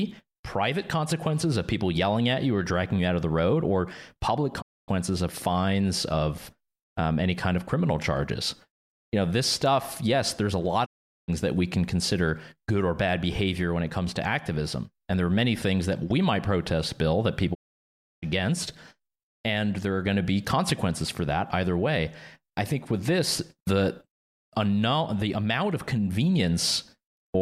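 The speech drops out three times, at 4.60 to 4.90 s, 10.84 to 11.30 s and 17.53 to 18.24 s. Each is a digital broadcast dropout: the receiver lost good frames and muted, fading out over 20 ms, then jumps back in with those stretches of programme gone.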